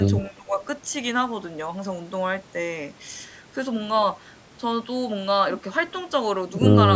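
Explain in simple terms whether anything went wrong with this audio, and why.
From 0.29 to 0.6 s the speech dips sharply. This is speech suppressed in double talk, likely an echo canceller turning down the talker while both sides spoke.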